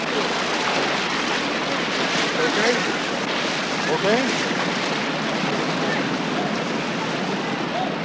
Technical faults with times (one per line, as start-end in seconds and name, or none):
none